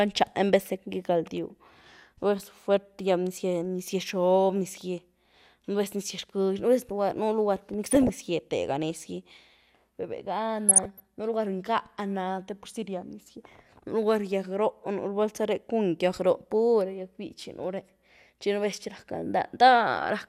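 Short blips of noise cut through the speech at 7.89–8.10 s and 10.69–11.03 s: DAB burbling, as uncorrected bit errors scramble MP2 sub-band levels frame by frame.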